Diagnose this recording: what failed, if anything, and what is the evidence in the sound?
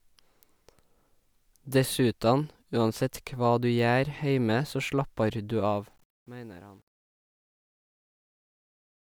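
Truncation distortion on the fade-out at a gain or format-conversion stage: gritty from 5.53 s, worst from 6.16 to 9.14 s, consistent with undithered 9-bit steps.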